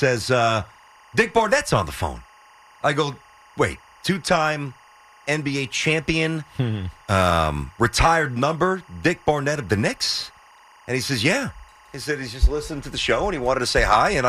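Timecode bleed runs throughout the speech: linear timecode leaking from an adjacent line adds a faint chirping warble near 1 and 2 kHz, well below the speech. Unlike a steady tone, it flips between two pitches in a rhythm that fits 23.976 fps code.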